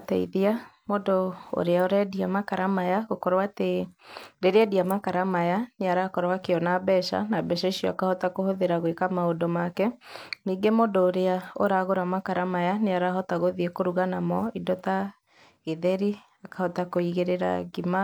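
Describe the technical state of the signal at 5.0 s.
At 5.0 s the speech signal is intact, with no dropout, distortion, clipping or other audible fault at that moment.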